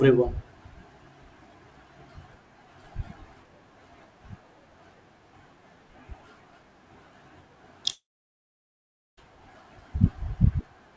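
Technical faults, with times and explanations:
7.92 to 9.19 s, long network dropout: the sound smears into a short fading buzz, then 1.16 s of silence before speech resumes with that stretch lost, likely from missing packets.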